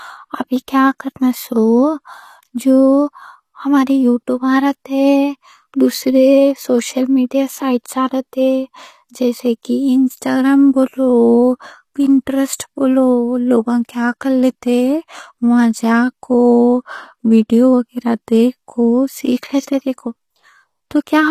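Throughout, the speech carries plainly audible HE-AAC compression, likely from a low-bitrate stream near 24 kbps. The treble is rebuilt by copying lower bands upward, so s sounds turn gritty and lispy. A spectrogram shows blocky, repeated patterns above the crossover.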